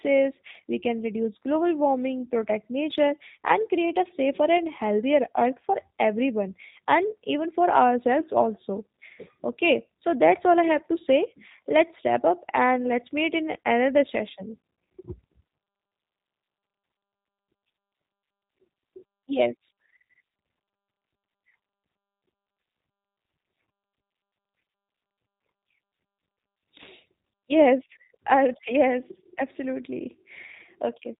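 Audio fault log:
Throughout: G.729 codec. The speech is rebuilt from a vocal tract filter, a pitch predictor and a few sparse pulses per frame, so it sounds plainly rough and synthetic, which fits a G.729A stream at 8 kbit/s. A spectrogram shows nothing above 4 kHz, with smeared, grainy harmonics below.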